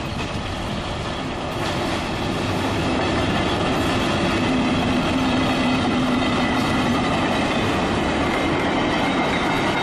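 At 1.50 s and again at 7.33 s, compressed frames are skipped: the decoder never plays a run of frames, so the audio leaps forward, by about a tenth of a second the first time and roughly 70 ms the second, which points to a handful of 23.2 ms frames dropped. The waveform shows an abrupt envelope discontinuity, and the spectrogram a brief vertical smudge where patterns jump.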